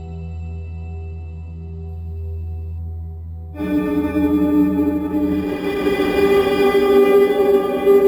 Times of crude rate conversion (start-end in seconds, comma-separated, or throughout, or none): 1.89-8.07